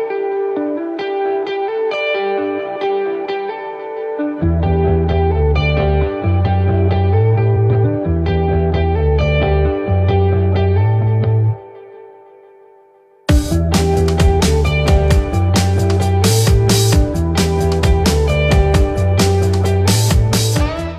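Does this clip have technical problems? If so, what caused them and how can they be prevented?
Yes. Between 7.56 and 7.85 s there are frames out of order: two adjacent blocks of about 139 ms each were decoded in swapped sequence, so that short stretch plays with its halves exchanged. It comes across as a garbled flutter. The block length points to runs of about three codec frames. No time is lost. Prevention: sequence-number the packets and reorder them in a jitter buffer before decoding.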